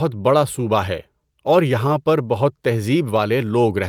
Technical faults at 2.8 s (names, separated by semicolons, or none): none